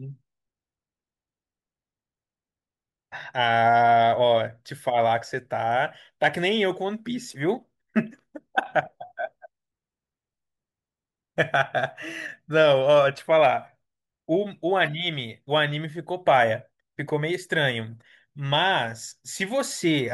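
No technical faults are audible.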